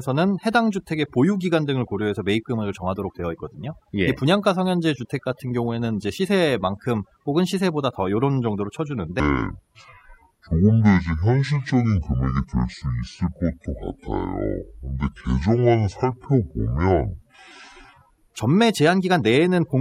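A speech clip with overdone noise removal throughout. The noise reduction was set too strong, so frequency bands near the noise level are pulled far down or shut off. Quiet parts of the speech vanish with them. Between words the background drops to near silence, dotted with twinkling specks. From 9.2 s to 18.36 s there is a section at the wrong speed. It plays at 0.554 times normal speed. Pitch falls with it, by about ten semitones. The speech turns deep, dragging and slow. Speed and pitch shift together, then snap back at 18.36 s. This is likely an editor or player running that part against the wrong clock.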